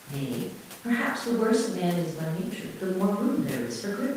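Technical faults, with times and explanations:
No technical faults can be heard in this speech.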